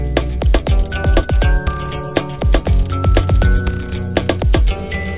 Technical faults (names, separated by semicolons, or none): none